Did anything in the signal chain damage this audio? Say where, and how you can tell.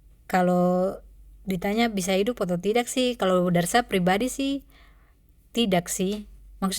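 No, nothing in this speech recording stood out as damaged by any stage of the signal chain on listening.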